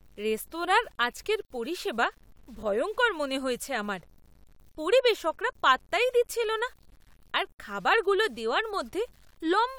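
Speech with grainy, signal-following distortion from start to finish, most likely low bit depth without dither. It sounds like 9-bit truncation, with the error sitting around 35 dB below the voice.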